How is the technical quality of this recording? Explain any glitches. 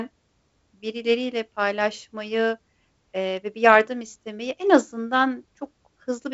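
No glitches turn up in the recording: it carries the band-limited character of G.722 wideband telephone coding at 56 kbit/s, with nothing above 7.7 kHz and only the light texture that this coding leaves on the speech.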